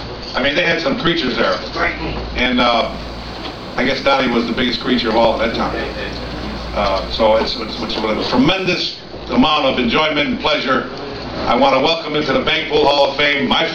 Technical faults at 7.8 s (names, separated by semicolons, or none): timecode bleed